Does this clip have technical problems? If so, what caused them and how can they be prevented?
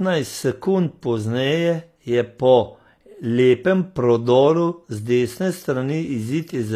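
Yes. HE-AAC compression, throughout the speech: the treble sounds gritty and lispy on s sounds, likely from band replication copying lower bands upward, which fits a bitrate around 24 kbps. Encoding at a higher bitrate with plain AAC would keep the original treble.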